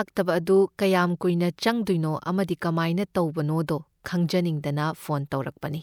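No technical faults are audible.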